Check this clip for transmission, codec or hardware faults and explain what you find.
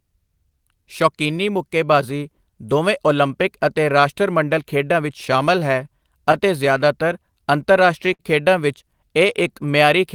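Three related timing faults affect this speech clip, all from the sending side's clock running slow.

Clock drift between sender and receiver runs throughout. The sender's audio clock is about 4% slower than the receiver's, so the jitter buffer keeps draining and the receiver has to compensate continuously. The result is a faintly unsteady pace across the whole clip.

Repeated timing corrections occur from 0.06 s to 9.80 s. To keep the buffer from emptying, the receiver repeatedly duplicates short pieces of audio, all in the same direction and unevenly spaced. Together they add roughly a third of a second, so the speech plays at about 97% speed with slight, irregular hiccups.

A short stall from a late packet occurs at 8.13 s to 8.22 s. The drift left the buffer empty when a packet was due, so the receiver stretched the last sound for 58 ms and then resumed from the same point. Nothing is lost, but one sound is held unnaturally long with a slight buzz or dip.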